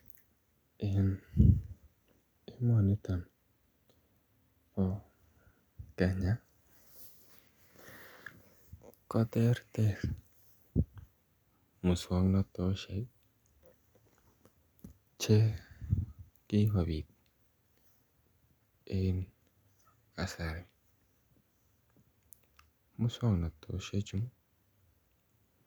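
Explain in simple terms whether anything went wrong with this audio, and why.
Nothing went wrong with it.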